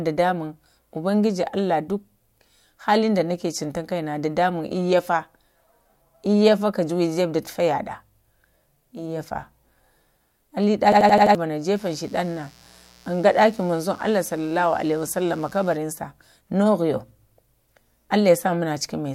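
A speech recording with two separate faults. From 10.92 to 11.35 s there is a system hang loop. An 85 ms fragment repeats exactly five times, a stutter at 11.7 Hz. That fits a 4096-sample buffer replaying while the system froze. Around 0.4 s of speech is lost. From 11.76 to 15.76 s a mains buzz sits under the speech. It is a steady, raspy 60 Hz hum with harmonics, roughly 30 dB below the voice. Switching spikes from a dimmer, rectifier or poor shielding are being picked up.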